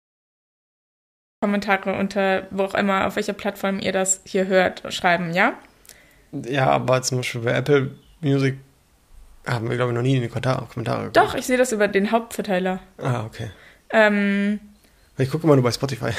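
The first 1.43 s are dead digital silence, then the sound bursts in at 1.43 s already mid-way through, with no attack or fade-in. This is a cut-off start: capture or the stream began late, so the opening of that sound was never recorded.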